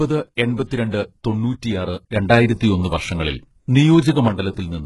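Throughout, the treble appears to be rebuilt by spectral band replication, likely HE-AAC compression at around 12 kbps. Nothing is present above 11.5 kHz, the copied treble sits unnaturally over the speech, and the codec damage is heavy.

At 2.16 s, a sudden gain jump raises the level by about 6 dB with no ramp, likely a gain setting applied abruptly. Speech and background noise jump together, holding the higher level until 4.28 s.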